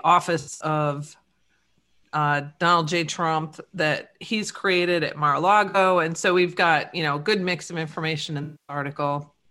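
Speech with smeared, noisy, phasey patches at 0.39–0.64 s, 5.68–5.76 s and 8.43–8.76 s: AAC frame loss with concealment, the decoder patching gaps from the last good spectrum.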